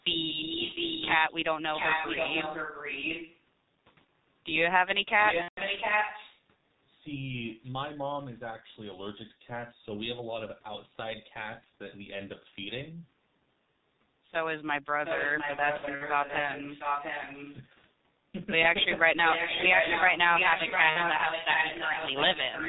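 A speech recording carried throughout by the G.723.1 codec at 6.3 kbit/s, with heavy codec damage. Everything above 4 kHz is missing, the voice is muffled and hoarse, and consonants smear. This steady dullness differs from the brief breakups caused by lost packets. An echo leak, likely from a loudspeaker whose echo canceller let sound through, replays the voice about 0.71 s late from 0.29 to 1.13 s, 1.73 to 3.39 s, 5.18 to 6.46 s, 14.94 to 17.55 s and 19.23 s to the end. It is as loud as the speech near 5.2 s and after 19.2 s, somewhat quieter in the first two stretches and well below the speech around 15 to 17.5 s. Its fixed lag sets it apart from room reverberation. VoIP packet loss concealed by the speech codec also appears. A fading stretch runs from 5.42 to 5.61 s, fitting about 150 ms of lost 30 ms frames. Several brief dropouts are scattered between 15.77 and 16.04 s, the longest about 60 ms. 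Another fade runs from 20.90 to 21.04 s. The sound weakens and fades rather than cutting off abruptly, which separates concealment from a plain gap.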